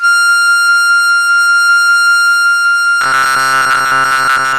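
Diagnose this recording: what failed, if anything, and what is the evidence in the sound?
The codec stage is the likely culprit. The music sounds like MPEG Layer II, MP2 compression, with too few bits to share among its 32 sub-bands, which fits a rate around 80 kbps. Upper bands are dropped entirely, so nothing sounds above 15.8 kHz, and the bands that remain are coarsely quantised. The damage is plainly audible throughout as a dulled top end with a gurgling, granular roughness.

From 3.01 s to the end at 4.59 s, the driver or buffer stage stops receiving new audio on time. The likely cause is playback software repeating its last short block to fill the gaps, so most of the real music in this stretch is skipped. Each repeated block is about 7.5 ms long, so the sound carries a fixed 133 Hz buzz. This is the robotic sound from repeated short buffers, a rigid metallic buzz that only loosely follows the music underneath.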